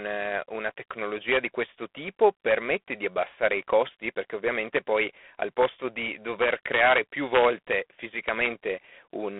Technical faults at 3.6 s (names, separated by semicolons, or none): G.726 ADPCM